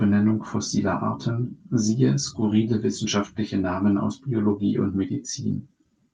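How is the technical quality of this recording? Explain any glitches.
The speech carries a recurring timing unsteadiness caused by a clock mismatch on the call link. The audio passed through an Opus call codec with a top end near 12 kHz, consistent with a moderate call bitrate.

Clock drift between sender and receiver runs through the whole recording. The pacing feels faintly uneven, with small hiccups at irregular moments. The sender's clock appears to run roughly 4 percent fast, so audio keeps arriving sooner than the receiver plays it, and the jitter buffer steadily overfills.

Repeated timing corrections are present from 0.32 s to the end. Playback effectively runs at 104 percent, with short slices trimmed out at uneven intervals, always in the same direction. Each cut is slight, heard, if at all, as a tiny skip or tempo wobble. This is how the receiver keeps its buffer from overflowing.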